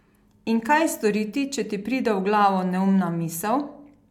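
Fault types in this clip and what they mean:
No faults can be heard in this recording.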